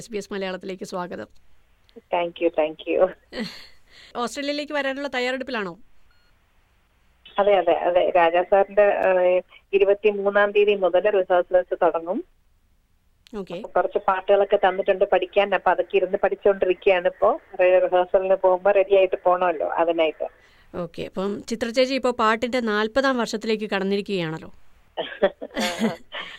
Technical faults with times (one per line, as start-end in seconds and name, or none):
9.03 block of digital silence